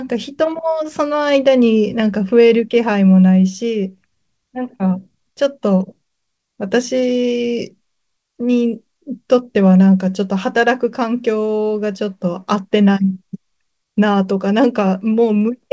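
Throughout the speech, the pacing feels faintly unsteady, dragging slightly with small stutters at uneven spacing. This is clock drift between sender and receiver: the sender's clock runs roughly 3 percent slow, so the receiver's jitter buffer keeps draining and must be refilled.

From 0.04 s to 15.4 s, tiny hiccups recur irregularly, each a brief repeated fragment, and the delivery runs at 97 percent speed. These are repeated timing corrections, all stretching in one direction, adding roughly 400 ms in total. The call path's band stops at 8 kHz.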